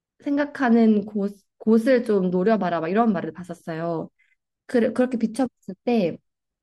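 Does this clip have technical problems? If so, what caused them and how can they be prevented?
No, nothing in this speech recording points to a technical fault, so there is no cause to trace and no preventive step to take.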